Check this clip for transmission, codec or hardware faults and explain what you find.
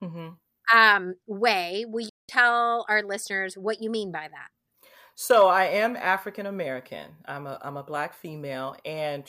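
One fault is present, a digital broadcast dropout. From 2.09 s to 2.29 s the speech cuts out and the programme resumes about 0.2 s later. The receiver stopped getting usable frames and muted its output until valid ones returned. The gap of about 192 ms fits six lost frames of 32 ms each. The sound fades to silence over 3 ms, so the cut is quick. Whatever was spoken during that gap is gone, not delayed.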